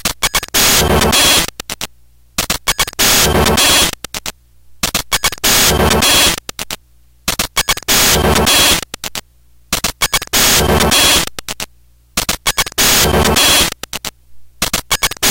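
From 0.38 s to 14.84 s there are periodic USB or driver dropouts: every 0.5 s about a millisecond of audio gets skipped, giving steady little ticks over the sound.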